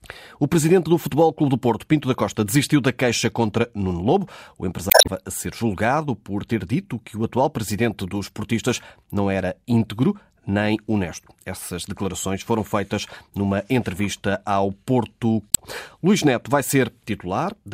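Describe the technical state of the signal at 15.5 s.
At 15.49 to 15.58 s, damaged data in the compressed stream garbles the frames; the decoder loses sync, producing a brief chirp, squawk, click or short hole.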